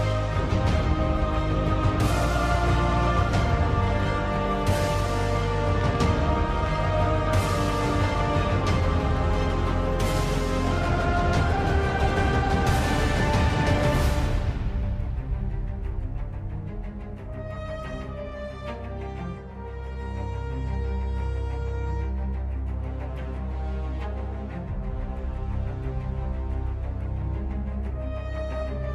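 From 5.81 to 6.77 s a train of clicks sits over the sound: about seven sharp, near-identical ticks at roughly 6.4 per second, spaced unevenly and peaking around 5 dB above the surrounding audio. The likely cause is electrical interference or a faulty connection or power supply injecting repeated pulses. Unlike random crackle, these clicks share one shape and cluster into a short burst. Unlike a single dropout, nothing is missing from the underlying sound.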